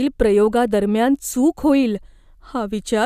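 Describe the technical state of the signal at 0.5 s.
The signal at 0.5 s is intact, with no fault audible at that point.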